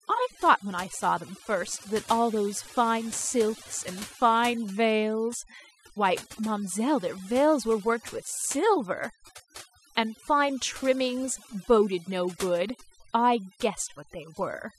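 From start to finish the speech carries overdone noise removal: a reduction stage set too aggressively pushes frequency bands near its noise estimate far down, so the background drops and breaks up into twinkling specks, and quieter voice components vanish.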